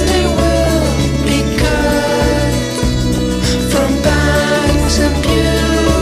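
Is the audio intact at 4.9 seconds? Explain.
No. DAB burbling runs from 4.83 to 4.90 s: residual bit errors corrupt the MP2 data over what sounds like about three frames, so wrong samples put short blips of noise into single sub-bands.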